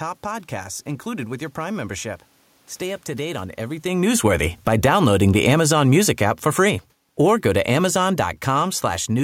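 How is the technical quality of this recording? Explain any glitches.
There's one real glitch in the recording, an automatic gain falling problem. Right after "up to date on", at 3.85 s, the level starts sagging and keeps going down until 9.19 s, about 12 dB lower by the end. The gain control judged the input too hot and kept easing back, so the speech and the room noise behind it sink together. The talker shifting around 3.5 s is just movement, not the system.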